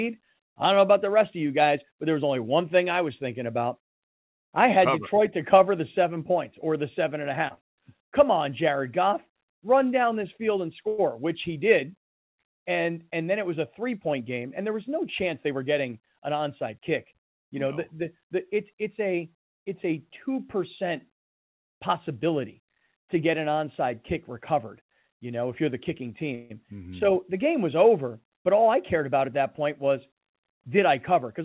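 At 10.88 to 11.14 s the sound stalls into a fading buzz for about 102 ms before resuming intact, a call audio freeze, likely from delayed packets draining the jitter buffer. From 13.79 to 15.63 s the speech runs hurried at unchanged pitch, about 6% fast, a jitter buffer speed-up trimming roughly a tenth of a second of pitch periods to cut built-up delay. A second freeze at 26.35 to 26.52 s fills about 151 ms with the same decaying continuation, and nothing is lost. From 28.40 to 31.27 s the speech rushes again at about 5% fast, shedding around 150 ms. Throughout, nothing above 4 kHz is heard, consistent with a 64 kbps G.711 call codec.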